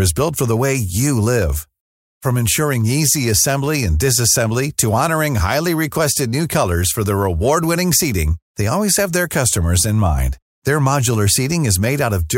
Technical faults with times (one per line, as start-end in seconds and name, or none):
none